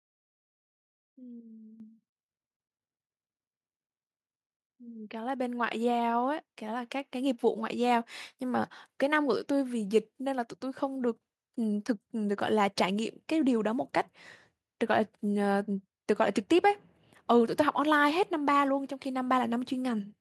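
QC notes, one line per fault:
1.8 s and 5.4 s: microphone volume stepped up. The call software judged the input too quiet and raised the device's microphone gain in single steps, about 8 dB then about 4 dB, so speech and background noise jump louder together at each point, with no fade.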